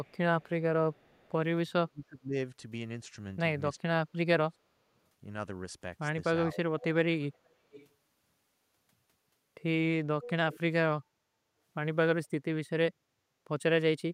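A loudspeaker-side echo canceller likely let residue through, so an echo leak returns a faint copy of the speech 386 ms late at 0.03–0.49 and 0.93–1.31 s. The same canceller likely misjudged simultaneous talk, causing speech suppressed in double talk: the level dips by up to about 30 dB at 1.85–2.34, 3.83–4.82 and 6.47–6.58 s. The echo leak returns at 6.80–6.86, 7.21–7.88 and 10.22–10.60 s, now 461 ms late and louder, reaching about 15 dB below the speech.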